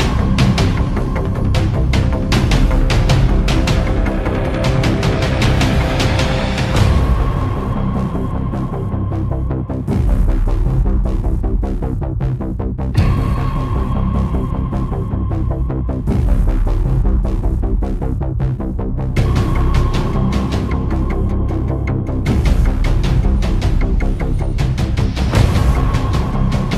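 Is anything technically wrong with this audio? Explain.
No, no technical faults heard.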